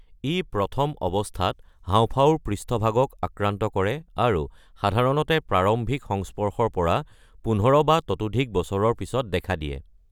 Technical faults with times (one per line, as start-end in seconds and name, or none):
none